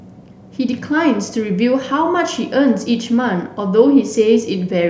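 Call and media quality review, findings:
No audible defects found in this speech recording; nothing to report against any component.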